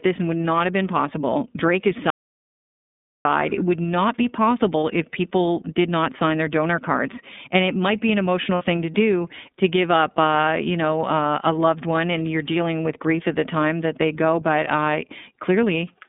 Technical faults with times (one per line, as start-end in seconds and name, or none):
0.00-16.08 iLBC codec
2.10-3.25 audio dropout to silence
4.80-4.83 lost iLBC frames
8.55-8.62 lost iLBC frames